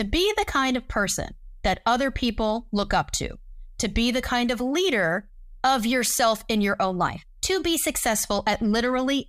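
From 7.00 to 7.99 s the speech runs 5.24% fast and rises 88.4 cents, nearly a semitone. Then it snaps back to normal pitch and pace. This is likely a drift correction step. Clock-matching software briefly changed the playback rate to rebalance its buffer.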